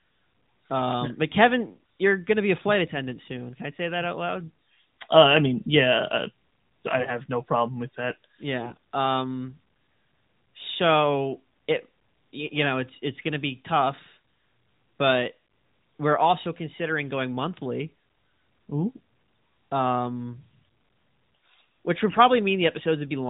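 At 8.60 to 8.77 s, and again at 22.08 to 22.21 s, AMR bit errors break through the band-limited narrowband mobile coding. Corrupted low-priority bits misplace excitation pulses and skew fine pitch, gain and spectral values. Pitch and level hold, but the sound turns briefly hoarse, scratchy and gargly, more so in the first burst.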